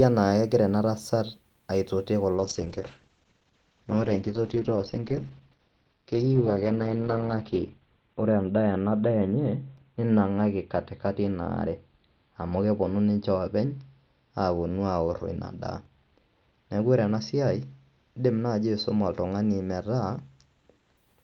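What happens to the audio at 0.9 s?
Nothing goes wrong at 0.9 s; the speech is intact at that moment, with no dropout, click or distortion.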